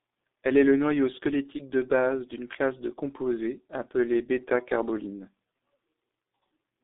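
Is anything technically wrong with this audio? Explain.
Yes. Throughout, the speech sounds muffled and hoarse with smeared consonants and nothing above 3.8 kHz. This is G.723.1 codec damage, consistent with about 6 kbit/s and 30 ms frames.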